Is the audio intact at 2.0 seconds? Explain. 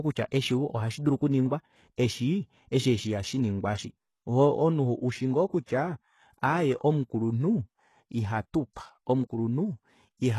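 No. Just before 2.0 seconds, at 1.96 s, there is pre-echo. It falls between "kutya eshi ohashidulu okuningwa" and "eshi eshi eshi ihashinginwa". A brief hiss of about 19 ms comes ahead of a sharp onset. The codec spreads its quantisation noise across a whole block. The noise that suits the loud attack also fills the quiet gap before it. So the onset sounds softened and smeared.

The moment also carries the clip-wide damage. Heavy compression, likely HE-AAC, strips everything above about 12.3 kHz. It rebuilds the upper band from copies of lower bands. That points to a low bitrate near 16 kbps. The copied treble does not line up with the real harmonics. So s sounds come out gritty and metallic.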